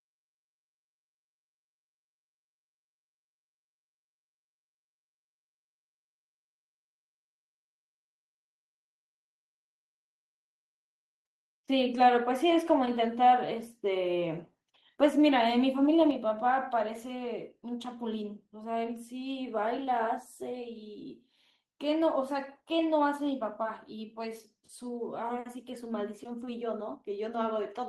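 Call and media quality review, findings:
Microphone volume stepped down at 16.11 s: speech and background noise drop together by about 4 dB in one abrupt step. Likely the call client's input-gain control lowering the capture device level after judging the signal too hot.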